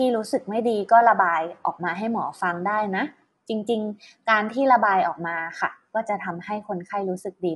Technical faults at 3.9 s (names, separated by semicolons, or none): low-delay AAC compression